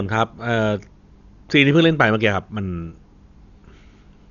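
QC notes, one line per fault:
Throughout: likely Dolby Digital compression, heavy damage, nothing above 6.9 kHz, dull speech with rough, fluttering noise, consistent with about 48 kbps starving mantissa bits.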